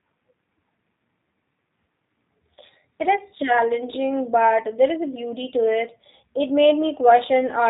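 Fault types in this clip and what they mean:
G.729 codec: Throughout, the speech is resynthesised from a vocal tract filter, a pitch predictor and sparse pulses, giving a plainly rough, synthetic edge that fits an 8 kbit/s coder. Unlike a simple low-pass, it alters the texture as well as stopping everything near 3.8 kHz.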